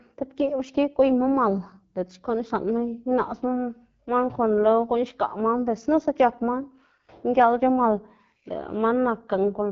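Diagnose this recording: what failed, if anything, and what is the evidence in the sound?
AMR wideband (HD Voice) codec, throughout: the speech sounds plainly rough and raspy, with nothing above 7.5 kHz, which fits a low AMR-WB rate near 8.85 kbit/s.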